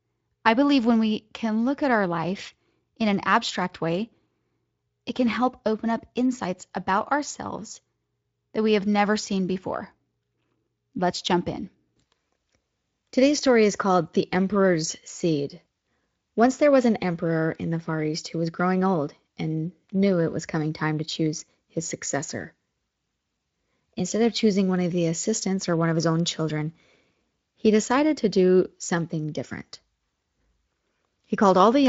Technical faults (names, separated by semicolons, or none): none